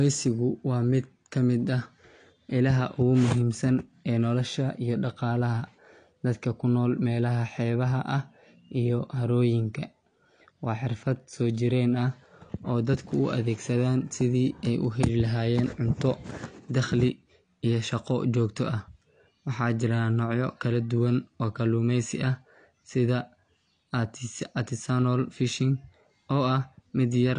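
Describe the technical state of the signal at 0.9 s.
AAC compression is audible at 0.9 s and across the whole clip. Nothing is heard above 9.8 kHz, the likely result of AAC-LC quantising each frame's spectrum too coarsely at a bitrate around 32 kbps, so the speech sounds dull and smeared, with fizzy, warbling sibilants.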